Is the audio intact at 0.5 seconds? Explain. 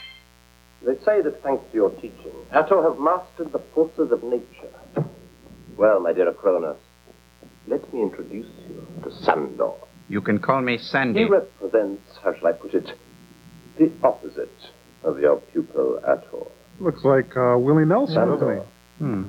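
No. At 0.5 s, as throughout the clip, there is mains buzz: switching spikes enter twice per 60 Hz cycle, giving a steady raspy buzz roughly 35 dB below the signal. A spectrogram shows evenly spaced lines at 60 Hz multiples reaching several kHz.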